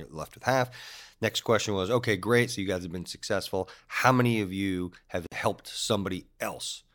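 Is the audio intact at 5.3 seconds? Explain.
No. From 5.27 to 5.32 s, right after "many of you have", a gap at a join of encoded pieces leaves about 50 ms of silence where separately encoded segments meet with their padding untrimmed. The speech then resumes exactly where it stopped, unlike a dropout that loses sound.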